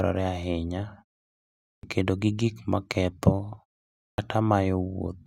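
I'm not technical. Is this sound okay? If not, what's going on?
No. There is a clipped start after a pause, twice: at 1.76 s and at 4.11 s. Each time, about 72 ms of the speech start is lost. The output goes quiet during the pause before, then wakes too late. The first sound is chopped off.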